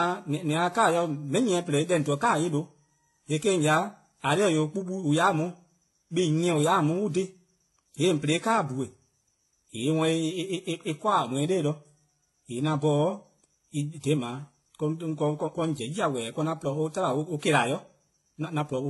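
Throughout the speech, two sets of codec artefacts are heard together, and the spectrogram goes blank above 11.7 kHz. This points to likely transcoding between lossy codecs, HE-AAC, then WMA 1.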